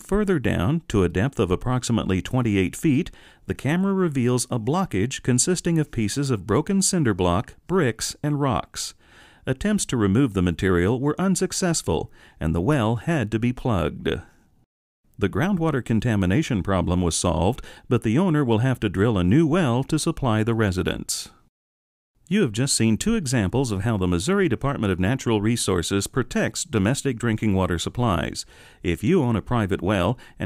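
Nothing in the audio stood out as a technical fault on listening.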